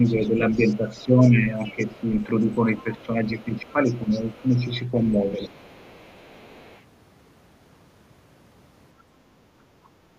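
A speech recording with two echo-related faults. The other side's voice leaking through is audible from 0.04 to 3.04 s, about 25 dB under the talker, and again from 3.37 to 4.77 s and 5.14 to 6.82 s, roughly 30 dB down. Likely cause: a loudspeaker feeding the microphone with residual echo the canceller failed to remove. Speech suppressed in double talk appears from 0.1 to 2.45 s and 2.83 to 5.52 s. The talker's level dips by up to around 10 dB, across roughly one and a half seconds in each span. This is likely the canceller attenuating everything while both sides overlapped.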